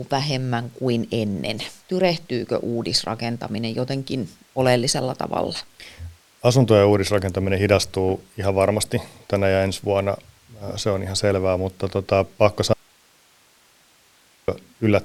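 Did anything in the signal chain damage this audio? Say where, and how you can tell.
Yes. Just after "selvää mutta tota pakko" the speech cuts out abruptly at 12.73 s and returns at 14.48 s, leaving 1.75 s of hiss about 35 dB down. This audio dropout to a faint residue likely points to a momentary analogue wiring break ahead of a live input.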